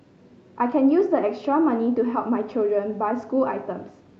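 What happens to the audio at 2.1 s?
Nothing goes wrong at 2.1 s: the speech passes through intact, with no dropout, glitch or distortion at that point, only the steady band-limited character of the call codec path, which tops out around 8 kHz.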